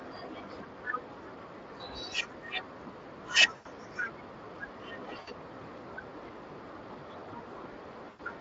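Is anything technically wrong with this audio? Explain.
Yes, there are two problems. The whole clip goes through the Speex codec, and the speech has a grainy, hoarse, plainly noisy edge throughout. That's the CELP coder running short on bits to rebuild the excitation, which fits a mid-range setting of around 20 kbps.

There's also VoIP packet loss concealed by the speech codec, at 3.55–3.67 s, 5.19–5.31 s and 8.09–8.21 s. Each gap is about 80 to 100 ms. The decoder fills it by stretching the last pitch and filter while fading the gain, so you get a short stretched, fading sound that stays weak for a moment after the packets come back.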